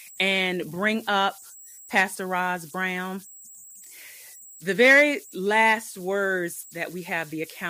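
Running right through this speech recording there's a whistle sitting around 7 kHz, which is classic converter idle tones. The delta-sigma converter wasn't dithered, so whenever the input gets small it settles into repeating bit patterns, and those turn into a tone in the pauses and a grainy hiss under the quieter passages. It's about 25 dB below the speech.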